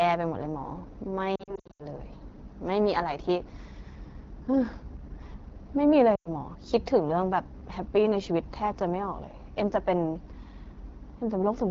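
Throughout the clip there is AMR wideband (HD Voice) codec damage. The speech is rough and raspy, which points to one of the lowest rates, around 8.85 kbit/s. On a spectrogram, harmonic detail thins toward 6.4 kHz, with a flat, noise-like band filling 6.4 to 7 kHz.

From 1.36 to 1.85 s, lost AMR speech frames leave about 260 ms of gaps scattered over 440 ms, the longest run 80 ms. The decoder reuses stale pitch and vocal tract settings at falling gain, so the sound warbles and dips. The waveform shows smeared, decaying patches. At 6.15 to 6.29 s, a 100 ms loss drops the sound to near silence within two frames before it returns briefly weak.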